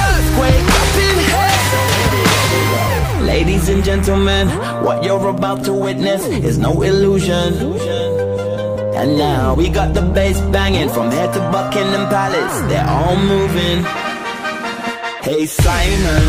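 No technical faults can be heard anywhere in this audio. Nothing breaks in, drops out or changes character at any point.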